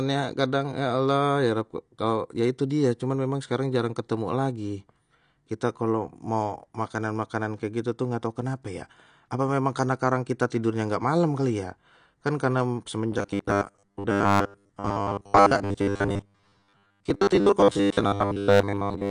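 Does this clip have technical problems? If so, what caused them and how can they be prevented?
Yes. The whole clip sounds dull and smeared. That is AAC compression, likely AAC-LC at a low bitrate around 32 kbps. The encoder discards high frequencies and coarsens the rest to save bits. Encode at a higher bitrate to prevent it.

Pre-echo occurs at 10.50 s, just before "nggak malam". A hiss of about 14 ms precedes the attack. The codec spread its noise across the whole block, so it leaked ahead of the sharp onset. Higher bitrates or shorter transform blocks on transients prevent this.

From 13.12 s, just after "kan karena", to the end, the speech becomes a rigid metallic buzz at 100 Hz. This is robotic sound from repeated short buffers. A stalled stream likely made the player loop about 10 ms of audio, replacing most of the real signal. A larger jitter buffer or steadier delivery prevents it.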